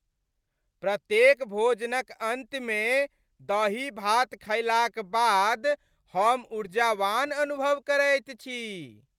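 No technical faults can be heard anywhere in the recording; the signal stays continuous and intact for its whole duration.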